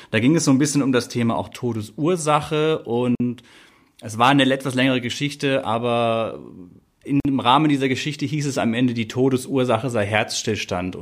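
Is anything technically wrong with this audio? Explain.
Yes. The speech was encoded as separate pieces joined every 4 s without trimming, so each run's start delay and last-frame padding remain. This leaves a gap at a join of encoded pieces at 3.15 to 3.20 s and at 7.20 to 7.25 s. Each is a gap of about 50 ms with smeared edges, and the speech then carries on from where it stopped.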